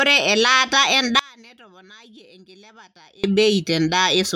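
From 1.19 s to 3.24 s the speech collapses to a faint residue, roughly 29 dB below the surrounding level, then returns at full strength. The pattern points to one channel inverted: with one side likely flipped in polarity, the material common to both channels cancels when they are summed to mono, taking the centred speech with it and leaving only the small difference between the channels audible.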